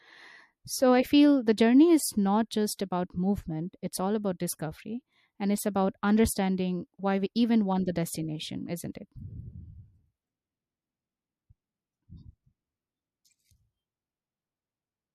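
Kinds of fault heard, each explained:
Pre-echo: A transform codec spreads quantisation noise across each whole block, so noise meant for a sharp attack leaks into the quiet just before it. Here a short hiss runs ahead of two onsets, at 2.78 s and from 8.93 to 8.95 s. It lasts 15 ms and then 21 ms, rising about 10 dB and about 14 dB. The smear fits a block of about 36 ms, with no switch to shorter blocks.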